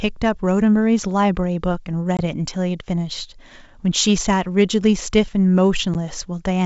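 Speech over a G.722 wideband link, clear up to about 7 kHz, which fits the full 64 kbit/s mode. There are two short holes of packet loss on an ADPCM call. The first runs from 2.17 to 2.20 s and loses about 20 ms, roughly a couple of packets. The second, at 5.94 s, loses about 10 ms, around one packet. Each gap has a hard edge, and afterward the decoder's predictor and step size are briefly out of sync with the sender's, so the sound comes back a bit off before it settles.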